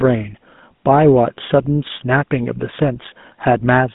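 Speech squeezed through the GSM full-rate codec for the whole clip. The voice has that plainly audible buzzy, gravelly grain from coarse pulse-driven excitation, which fits the old 13 kbps full-rate coder. The line band runs from about 150 Hz to 3.6 kHz, with nothing above 3.8 kHz.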